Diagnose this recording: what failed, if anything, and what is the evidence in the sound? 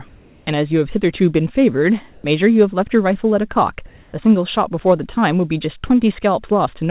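Comfort noise in place of the background, from call processing: the pauses at 0.08–0.47 s, 2.12–2.24 s and 3.86–4.13 s become steady, featureless hiss with level shifts of about 4, 1 and 3 dB. A spectrogram shows smooth, textureless bands, capped at 4 kHz like the narrowband call path, with the background detail gone. The likely cause is discontinuous transmission, with the receiver synthesising noise during silence.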